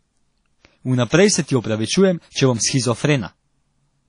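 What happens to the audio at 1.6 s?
Right after "se ti", from 1.60 to 1.64 s, there's pre-echo: a short hiss creeps in about 39 ms ahead of the attack, because the codec spreads a block's quantisation noise into the quiet part before the attack, so the onset sounds smeared. It sits on top of plainly audible damage from what's likely WMA compression, with nothing above 10.1 kHz, which fits something around 32 kbps.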